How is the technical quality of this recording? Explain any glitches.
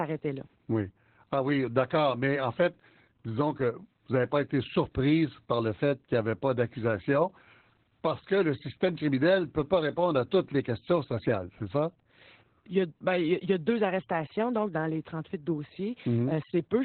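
Pretty rough, honestly. The whole speech clip carries heavy Opus voice compression: SILK narrowband mode cuts everything above 4 kHz and coarsely codes the excitation, which fits roughly 8 kbps. It comes out muffled, hoarse and a bit robotic.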